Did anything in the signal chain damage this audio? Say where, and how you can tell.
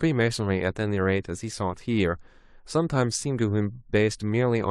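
No, nothing in the signal chain damaged this audio; there is no point where any stage can be heard to have harmed it.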